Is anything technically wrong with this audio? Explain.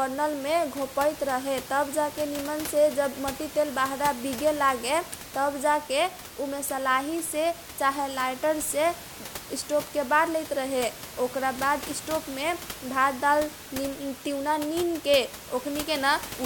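No, nothing is technically wrong.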